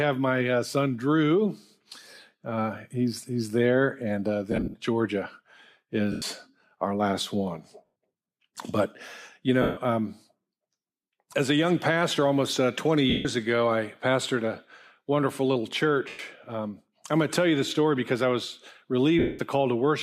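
You can hear lost LE Audio frames at 4.52–4.74, 6.12–6.22, 7.85–7.88, 9.62–9.77, 13.10–13.26, 16.08–16.19 and 19.19–19.39 s. The decoder papers over each gap by replaying the last spectrum with scrambled phase, so tones smear into noisy hiss that fades rather than cutting out. The first is broken up, roughly 50 ms at most in one go, while the last covers 200 ms.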